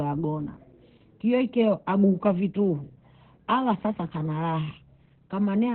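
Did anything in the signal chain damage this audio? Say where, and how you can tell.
Yes. Throughout, the speech sounds muffled, hoarse and slightly robotic, with nothing above 4.2 kHz. That points to Opus voice compression at the codec stage: SILK in narrowband mode coding the excitation coarsely, which fits a bitrate of around 8 kbps.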